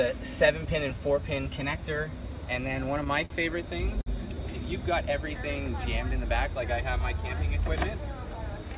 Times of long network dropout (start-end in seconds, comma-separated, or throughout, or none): none